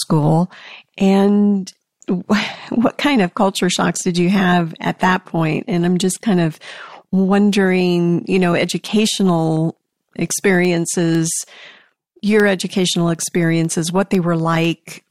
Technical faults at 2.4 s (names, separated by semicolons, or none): none